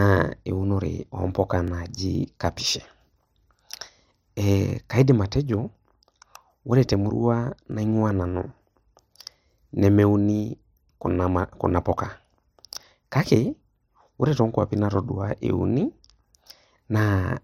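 It's a speech clip with overlapping chunks: every 3 s, at 1.68, 4.70, 7.72, 10.74, 13.76 and 16.78 s, a sliver of about 21 ms plays twice, giving a stutter-click. You'll catch it right before "kaidim atejo", between "ore temurua" and "naing'ua nanu", and just before "ore too nkwapi natadua". Each chunk starts before the previous one finished, so about 21 ms is doubled at every join.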